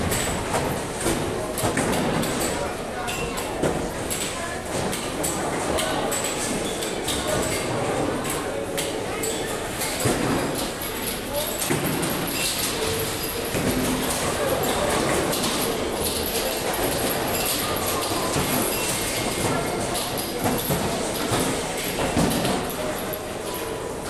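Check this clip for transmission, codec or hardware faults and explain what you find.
No transmission, codec or hardware faults turn up in this clip.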